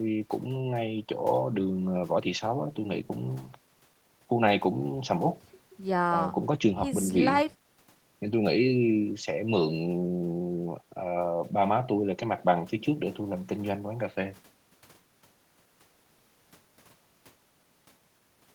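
No technical faults can be heard anywhere in the recording.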